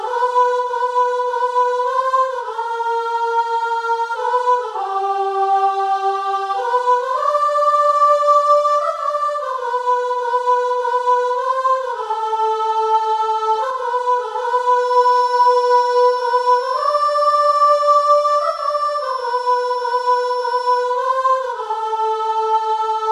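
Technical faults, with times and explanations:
2.53 to 4.16 s, drift correction step: the sound suddenly runs about 5.3% fast, so pitch jumps nearly a semitone (90 cents) and then snaps back. It's likely a clock-sync routine changing the playback rate in one go to rebalance its buffer.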